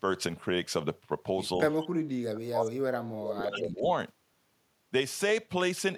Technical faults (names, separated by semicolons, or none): speech suppressed in double talk; echo leak